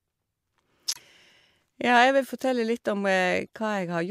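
At 0.91 s the speech drops into dead silence until about 1.02 s. That's a corrupt frame muted: damaged compressed frames were rejected by the decoder and the player filled the gap with silence. The 0.11 s hole fits about four consecutive frames, and it cuts in abruptly while timing holds.

Around 3.46 s there's a brief glitch, quiet at roughly -40 dBFS. That's a corrupt frame decoded: flipped bits slipped past the decoder, which played them anyway and put energy at the wrong frequencies. It lasts about a couple of frames, heard as a short burst of misplaced sound.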